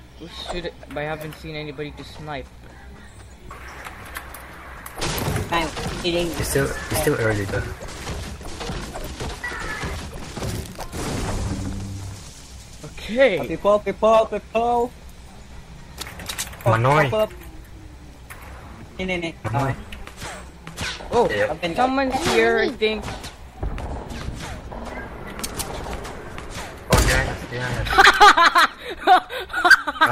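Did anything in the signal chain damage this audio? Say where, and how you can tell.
Yes. At 3.32 s the sound lurches forward with no pause: about a fifth of a second is simply absent, and the two sides butt together. This skip ahead comes from the network stage, where that stretch was lost in transit or discarded by an overflowing jitter buffer while later audio was already queued.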